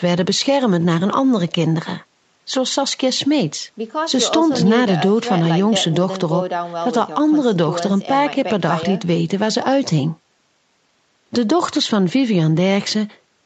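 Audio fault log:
No faults detected.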